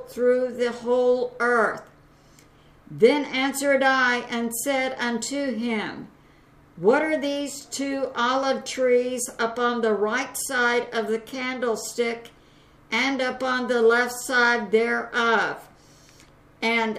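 Nothing is technically wrong with this audio clip.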